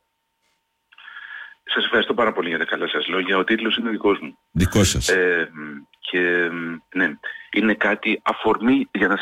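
No technical faults are audible.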